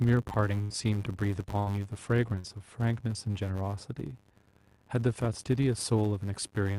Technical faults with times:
0.00-6.78 filter restarted on every block
0.61-0.87 burst of packet loss
1.59-1.70 burst of packet loss
2.39-2.49 burst of packet loss
6.11-6.30 jitter buffer speed-up

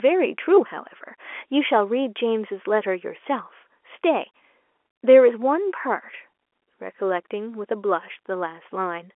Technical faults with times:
none

